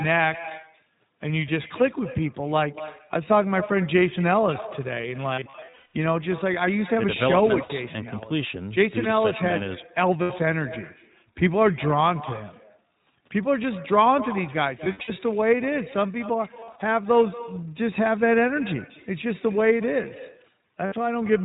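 From the start, the far end is playing the call through a loudspeaker with no echo canceller, so its microphone returns the talker's speech after the network round trip. Every phrase is followed, roughly a fifth of a second later, by a copy about 16 dB quieter and thinner, a steady shadow trailing each syllable across the whole clip.

The speech also passes through the iLBC codec, whose narrowband coding discards everything above 4 kHz and rebuilds each short frame independently. The result is plainly audible: dull, telephone-band speech with a rough, slightly synthetic grain. The frame rhythm fits 20 ms frames, and the quality points to the 15.2 kbps mode.

Packets then go missing, producing lost iLBC frames. Each time, the decoder fills the gap by repeating the last pitch cycle blended with noise, and the speech recovers as soon as real frames return. The worst stretch runs from 5.34 to 5.96 s, where about 400 ms is lost in scattered bursts, the longest close to 150 ms, heard as held, buzzy vowel fragments. 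Short single gaps follow at 7.64 s (60 ms) and 10.22 s (80 ms). A scattered cluster from 14.84 to 15.11 s loses 160 ms, with runs up to about 70 ms. Another cluster from 16.60 to 16.82 s loses 120 ms in brief pieces, and a last 60 ms gap falls at 20.86 s.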